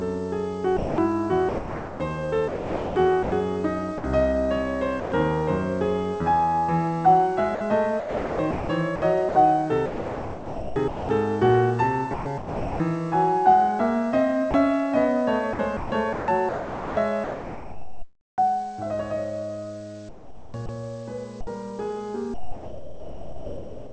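Sound chopped by the voice detector, 0.77 to 4.04 s: the music breaks up repeatedly as a sender's voice detector likely toggles transmission, with about 1.35 s swapped for comfort noise.

Sound dropped by the voice detector, 5.00 to 5.12 s: a 120 ms gap where the music gives way to steady synthetic noise, likely because the detector briefly judged it background.

Sound chopped by the voice detector, 7.55 to 11.09 s: flickering between real music and comfort noise, about 1.86 s replaced in all, likely from the detector switching on and off.

Sound chopped by the voice detector, 12.14 to 12.80 s: a shorter choppy stretch, about 0.54 s filled with noise, likely from the same switching behaviour.

Sound dropped by the voice detector, 14.51 to 14.54 s: a 30 ms dropout into comfort noise, likely the detector momentarily cutting transmission.

Sound chopped by the voice detector, 15.53 to 18.38 s: the choppy passage with the most lost, nearly 2 s of the music replaced by synthetic noise, likely through repeated detector gating.

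Sound chopped by the voice detector, 20.09 to 21.47 s: intermittent breaks, about 0.54 s of noise fill, likely again from the detector toggling.

Sound dropped by the voice detector, 22.34 s to the end: the music falls away into steady comfort noise, about 1.42 s of it lost, likely because the detector stopped sending and never triggered again. Throughout, nothing is heard above 8 kHz, which fits a G.722 call codec.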